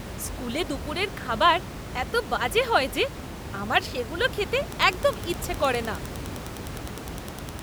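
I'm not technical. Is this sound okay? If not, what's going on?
No. From 4.65 s to the end, there is Wi-Fi interference. A nearby wireless radio leaks into the audio circuit, adding a faint, steady ticking about ten times a second.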